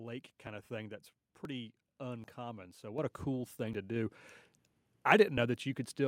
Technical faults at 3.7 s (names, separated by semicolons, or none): dropped buffer (overrun)